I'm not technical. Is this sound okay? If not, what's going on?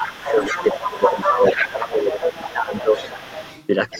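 No. The echo canceller, the part of a call system that stops the other person's voice from bouncing back, likely struggled while both people talked at once. The result is speech suppressed in double talk: the voice dips from 0.0 to 0.54 s, 0.72 to 1.43 s, 1.68 to 2.96 s, and again from 3.93 s to the end.

The same canceller also likely failed to fully remove the other person's voice coming from the loudspeaker, which gives the other side's voice leaking through. A second, quieter voice runs underneath from 0.2 to 3.67 s, and returns faintly from 3.9 s to the end.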